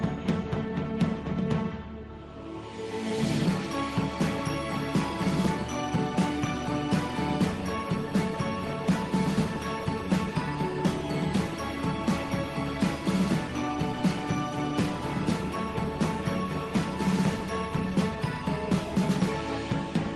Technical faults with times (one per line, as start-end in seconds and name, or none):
none